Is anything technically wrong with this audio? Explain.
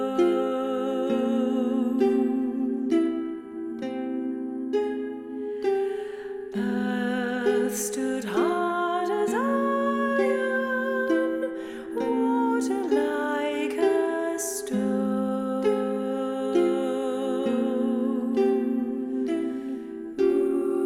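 No, no technical faults are audible.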